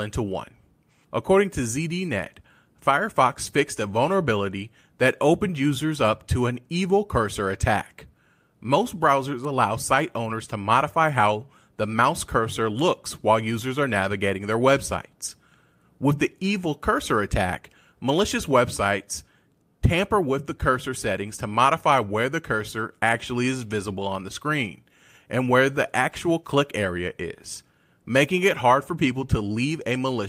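No technical faults can be heard anywhere in the recording, and the speech signal stays continuous and intact throughout.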